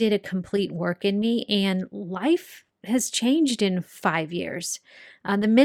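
No technical faults can be heard anywhere in the speech. With nothing going wrong, there are no times or values to report.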